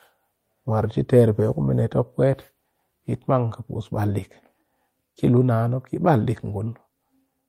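No audible technical faults turn up anywhere in this recording.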